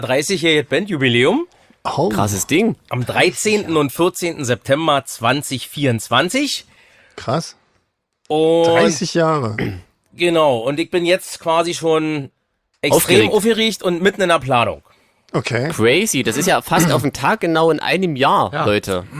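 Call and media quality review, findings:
Nothing here worth a ticket: no dropouts, glitches or level jumps to be heard anywhere in the clip.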